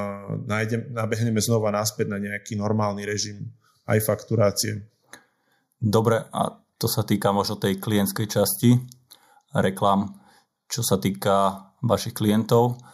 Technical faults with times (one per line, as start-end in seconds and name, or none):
0.00-12.94 channel delay (comb filtering)